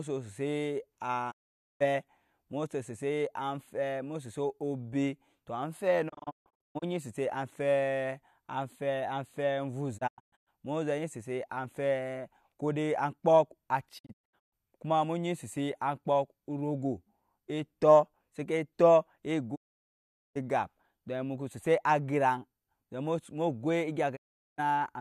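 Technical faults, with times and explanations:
1.30–1.82 s, 6.08–6.84 s, 9.97–10.49 s, 13.97–14.54 s, 19.54–20.37 s, 24.15–24.60 s: digital broadcast dropout. The receiver mutes with a 20 ms fade when frames fail. The holes run from 0.34 to 0.79 s, and the audio sent meanwhile is lost. The 6.08, 9.97 and 13.97 s events break into short gaps of up to 0.14 s.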